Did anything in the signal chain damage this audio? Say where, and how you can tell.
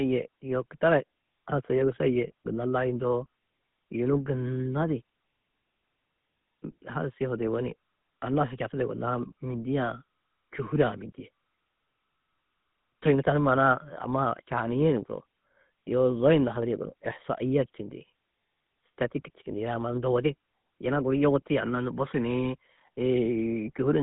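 Yes. The damage sits at the codec stage and runs through the whole speech clip. The sound is buzzy and gravelly from start to finish, the roughness typical of the GSM full-rate codec. The band is narrow, from about 150 Hz to 3.6 kHz, with nothing above that. The codec rebuilds the voice from a vocal-tract model fed by sparse, regularly spaced pulses, which fits a 13 kbps stream. That coarse excitation produces the plainly audible grit.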